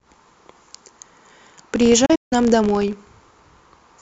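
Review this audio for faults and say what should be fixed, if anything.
Filter restarted on every block, throughout the clip. A filter drops its internal state at each block boundary and starts from zero, so every block opens with a small transient. The result is a steady 62.5 Hz buzz that rises and falls with the speech level, which fits a 256-sample block. To prevent it, carry the filter's state from one block to the next instead of resetting it.

Digital broadcast dropout, from 2.06 s to 2.33 s. The receiver lost usable frames and muted, fading out over about 8 ms each time. About 192 ms of speech vanishes in holes scattered over 256 ms, the longest lasting 160 ms, and that material is gone. To prevent it, improve reception margin or add error protection so that frames pass their checks.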